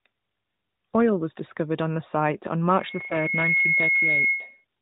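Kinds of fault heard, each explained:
Loudspeaker feedback squeal: Right after "on the site on", around 2.73 s, the mic starts hearing its own loudspeaker and the loop runs away at about 2.2 kHz. The tone swells over roughly the first 0.7 s, then sits a little above the speech until about 4.65 s.
Lost AMR speech frames: At 3.08 to 3.16 s, inside the squeal, there's a brief dip and warble where the decoder patched over missing data with its last good settings at lower gain. It sounds like a single 20 ms frame dropped, which fits the narrowband mobile sound of the whole clip.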